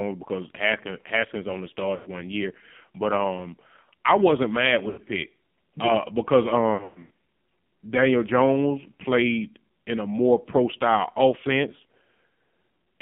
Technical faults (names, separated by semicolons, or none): AMR narrowband mobile codec; lost AMR speech frames